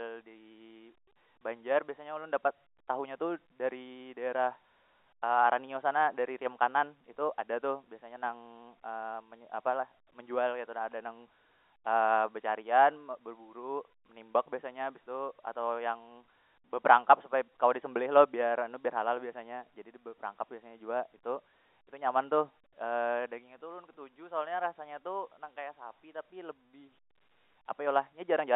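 Nothing stood out on listening to this speech clip, which comes across as ordinary telephone-band audio.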